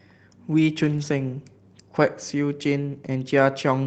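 From 0.85 to 1.03 s there is a lost packet rebuilt from error correction. Packets dropped out, and the decoder filled about 100 ms with the low-bitrate copies carried in the following packets. There is no gap, but that stretch sounds rougher and noisier. The duration fits five lost 20 ms Opus packets.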